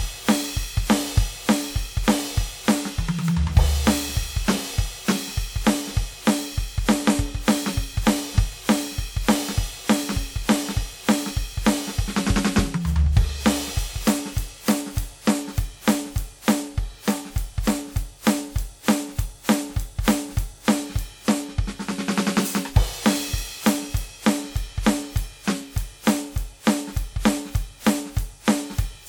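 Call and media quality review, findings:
Music, throughout. Swirly, smeared, hollow texture, worse than a single encode at this rate would give; transients blurred, attacks soft. Bandwidth runs to about 20.1 kHz, so the damage is in-band, not a low-pass. Probable component: transcode chain. Likely generation loss, with roughly seven lossy decode/re-encode passes. Artefact character points to WMA 1 at around 96 kbit/s. Each pass requantises on a shifted frame grid, so noise accumulates.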